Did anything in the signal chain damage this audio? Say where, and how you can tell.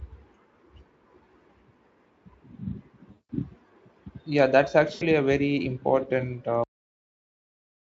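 Yes. VoIP packet loss concealed by the speech codec, at 3.11–3.30 s and 4.93–5.04 s: 180 ms and 80 ms of packets vanished on the network, and the decoder smeared the last sound into a fading buzz or coloured noise.

Cut-off end at 6.64 s: at the storage or playback stage the final buffers were never written, so the speech halts mid-sound into instant digital silence with no decay.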